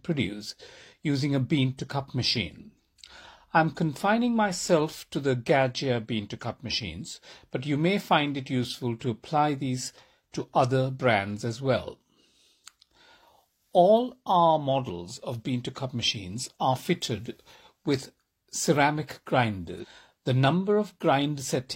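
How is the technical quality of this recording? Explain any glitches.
The recording has one glitch, near the end of the speech. From about 19.79 to 19.85 s, just after "are fitted with ceramic", the audio jumps abruptly forward with a brief blip. The likely cause is a stream segment skipped. In a segmented stream, the player fetches audio in short chunks. When one chunk fails to load, it moves straight on to the next. A stretch of the programme is lost, and the join is heard as a sudden discontinuity.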